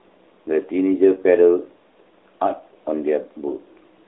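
No technical faults can be heard in the speech. It arrives through the AMR narrowband mobile codec at 12.2 kbps, so the sound sits within a telephone band of about 300 Hz to 3.7 kHz and carries only light codec colouring.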